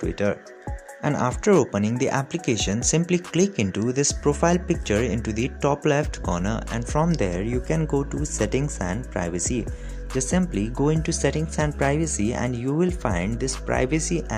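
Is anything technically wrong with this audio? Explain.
No, nothing technically wrong stood out on listening to this audio.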